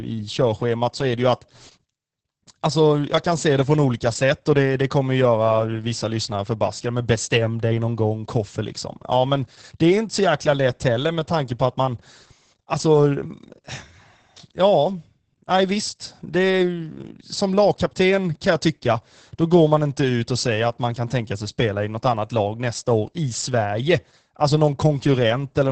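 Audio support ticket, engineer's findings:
Opus voice compression, full clip. Speech muffled, hoarse, slightly robotic; heavy coding damage throughout. Nothing above 8.6 kHz, so wideband. Probable component: Opus encoder in SILK linear-prediction mode. Coarse excitation coding at a low rate, consistent with about 10 kbps and 20 ms frames.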